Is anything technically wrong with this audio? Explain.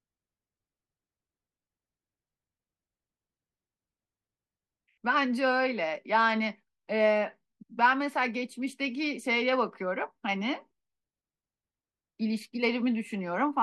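No, nothing technically wrong can be heard here.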